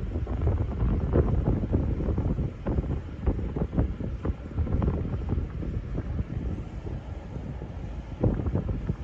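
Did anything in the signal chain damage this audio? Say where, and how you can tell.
No, nothing in the signal chain damaged this audio.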